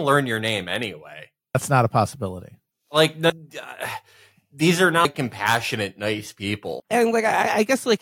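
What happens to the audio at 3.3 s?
At 3.3 s the speech skips abruptly forward. Roughly 300 ms of sound is gone, with the two sides butted together and no silence between them. This is audio missing between chunks, likely from a recorder or processor working in 2.0 s blocks and dropping material at the handover.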